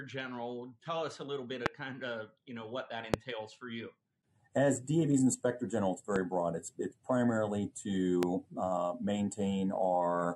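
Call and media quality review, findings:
Loud pop, four single events. 1.66–1.68 s, 3.14–3.16 s, 6.16–6.18 s, 8.23–8.25 s. Each about 25 ms. Sharp transient well above program level: roughly 25 dB at the first two, nearer 15 dB at 6.16 s, about 20 dB at 8.23 s. Sound continues underneath. Probable component: likely an electrical glitch in the capture chain, such as static, a switch or a driver fault. A voltage pulse is added to the signal and shaped by the downstream circuits.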